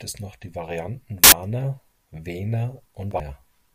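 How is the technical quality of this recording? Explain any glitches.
Two brief dropouts spoil this take, both of the compressed frames skipped kind. Around 1.24 to 1.32 s the speech jumps forward by roughly a tenth of a second, and again at 3.11 to 3.20 s it leaps ahead by something like a third of a second. Whole compressed frames never reached playback, so the audio lurches ahead by a whole number of frames.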